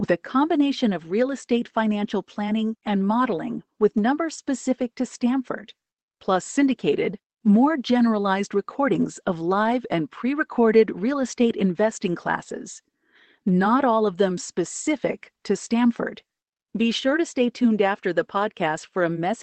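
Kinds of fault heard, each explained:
No faults are present: the speech comes through a call path working as expected, with the top end rolled off at about 8 kHz, as fits a wideband Opus setting at a modest bitrate.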